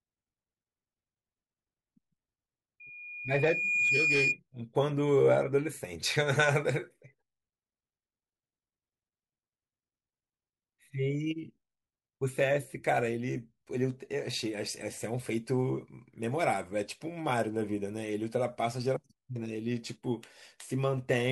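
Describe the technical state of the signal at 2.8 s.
At 2.8 s a loudspeaker feedback squeal kicks in and runs to about 4.39 s. The mic is hearing its own speaker, and around 2.4 kHz the loop gain tops one, so that tone swells over roughly a second into a piercing whistle sitting about 5 dB above the speech.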